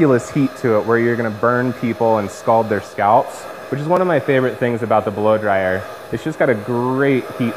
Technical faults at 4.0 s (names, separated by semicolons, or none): block of digital silence